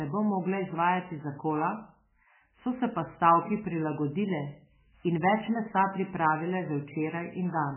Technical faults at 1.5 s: MP3 compression

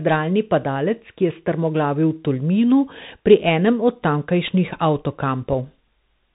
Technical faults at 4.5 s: Bluetooth CVSD headset codec; Bluetooth headset packet repeated

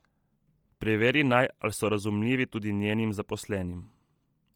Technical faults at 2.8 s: Bluetooth LC3 compression

